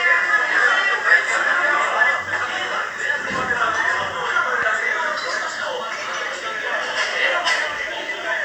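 No technical faults can be heard anywhere in this recording of sounds; the signal stays intact and steady throughout.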